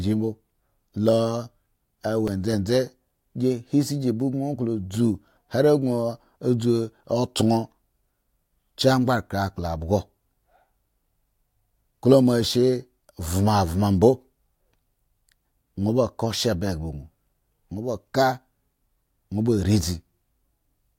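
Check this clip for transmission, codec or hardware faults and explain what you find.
One fault is present: a repeated buffer at about 2.28 s in this speech clip. New audio failed to reach the output in time, so the device replayed the block it had just played, sounding it twice with a hard join between the copies. The repeated stretch is very short, which fits a buffer of about 5 ms, so it is heard as a brief click rather than a stutter, and a few milliseconds of audio go missing.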